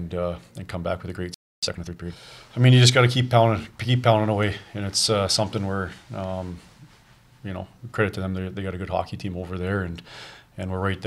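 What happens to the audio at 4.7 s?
Nothing goes wrong at 4.7 s; the audio is intact at that moment.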